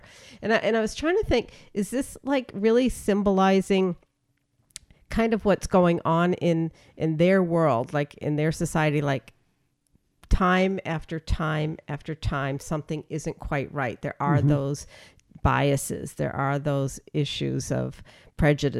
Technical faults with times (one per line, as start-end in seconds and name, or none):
none